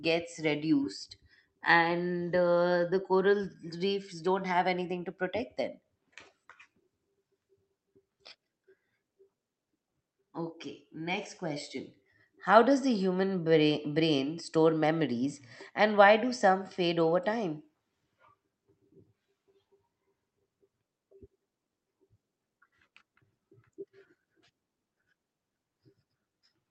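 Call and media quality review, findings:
No faults found; call path audio sounds as expected.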